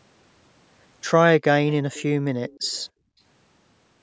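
From 2.48 to 2.83 s a faint delayed copy of the speech trails it by about 300 ms, far quieter than the direct sound. This is likely an echo leak, where the far side's echo canceller let its loudspeaker pickup through. A spectrogram shows a weak, smeared repeat of the preceding harmonic pattern.

From 2.91 to 3.2 s the background is gated by the echo canceller. It pulled the microphone down by about 28 dB for roughly a third of a second, so the room sound briefly vanishes. On the waveform the noise floor collapses to a near-flat stretch before recovering, and the spectrogram shows an empty band up to the 8 kHz ceiling.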